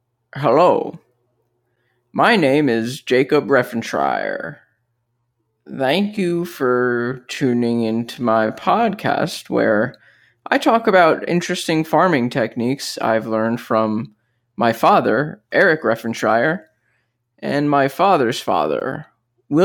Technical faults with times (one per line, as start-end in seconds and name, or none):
3.93-8.87 time-stretched section